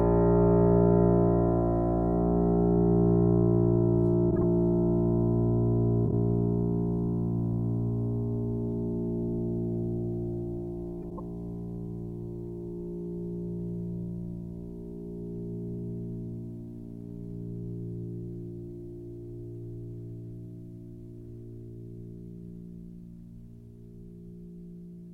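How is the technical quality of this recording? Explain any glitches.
The recording has three short glitches, all of the same kind: frames out of order, at 4.31 to 4.43 s, 6.06 to 6.13 s, and 11.02 to 11.20 s. In each, two adjacent blocks of the music were decoded in swapped order. The blocks are about 52 ms, 26 ms and 78 ms long, which fits runs of two, one and three codec frames. The swapped segment sounds like a brief garbled flutter. Unlike a dropout or a stutter, nothing is lost or repeated, so the music's timing stays intact on either side.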